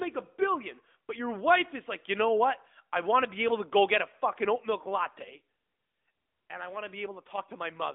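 Speech runs through an AMR narrowband mobile codec (AMR-NB) for the whole clip. Energy stops at about 3.8 kHz, and the line band sits at roughly 250 Hz to 3.6 kHz, giving the thin, boxy telephone quality. The codec rebuilds the voice from a vocal-tract model excited by sparse pulses, and the resulting coding damage is plainly audible, a synthetic edge that fits a mid-range rate of around 10 kbps.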